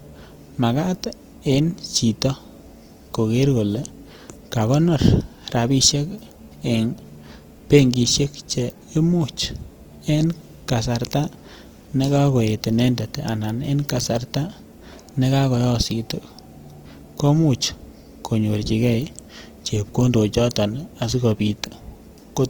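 From start to finish the speech carries plainly audible damage, likely from Opus compression in its music (CELT) mode. The encoder keeps each band's energy but runs short of bits, so it fills bands with folded copies of lower content or with noise. Harmonic detail in the voice therefore turns rough and grainy rather than swirly. Content still reaches about 20.4 kHz, so bandwidth is not narrowed, and the degree of roughness fits a rate around 24 kbps.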